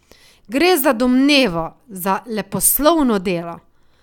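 No technical faults are audible anywhere in the recording.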